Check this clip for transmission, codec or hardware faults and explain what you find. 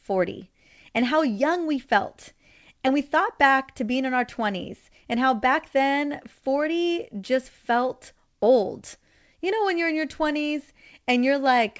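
Nothing faulty turns up anywhere in this speech recording.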